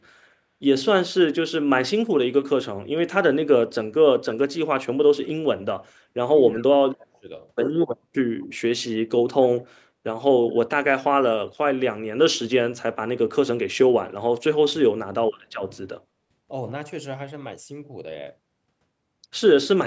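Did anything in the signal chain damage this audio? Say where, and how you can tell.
Yes. Echo leak at 6.56 to 6.64 s, in call processing: a faint copy of the speech, about 25 dB down, trails by 222 ms, likely residual loudspeaker echo the canceller missed.

Speech suppressed in double talk at 6.77 to 7.28 s and 14.67 to 14.8 s: the talker drops by roughly 30 to 35 dB in pieces, likely the canceller ducking both sides.

Background gated by the echo canceller at 16.08 to 16.17 s: room sound dips about 15 dB for a brief moment while the canceller clamps the microphone, then recovers.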